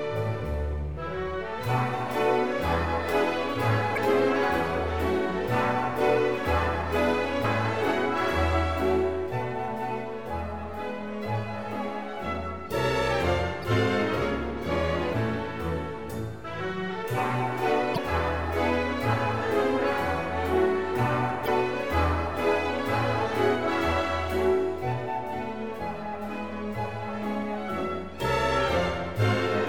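Damaged data in a compressed stream disrupts the audio five times. Brief blips occur at 3.93 to 3.98 s, at 7.43 s, at 13.60 to 13.64 s, at 17.94 to 17.98 s and at 21.44 to 21.48 s. Each lasts about 40 ms or less. At these points the compressed bytes are corrupted. The decoder misreads the affected frames and loses sync until it finds a valid frame header. The result is a short chirp, squawk, click or hole.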